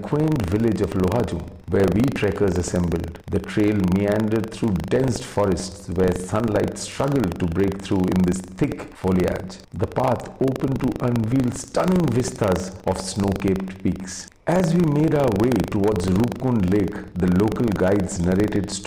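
Hard clipping runs through the whole clip. The sound is driven about 6 dB past what one stage in the chain can carry, so its loudest peaks are sliced flat, with only a small share of the waveform, around one or two percent, pushed over the limit. Those squared-off tops throw extra harmonics high into the spectrum, heard as a gritty crackle riding the peaks.

Buffer tearing is also present from start to finish, as a steady robotic rattle at 25 Hz that sits on the sound whenever there is signal and drops away in the gaps. The writing side and the reading side of the playback buffer have drifted out of step, so in every period a small slice, a few percent, is replaced by audio from roughly 70 ms earlier, spliced in with abrupt joins at both ends. A 25 Hz repeat points to a period of about 40 ms.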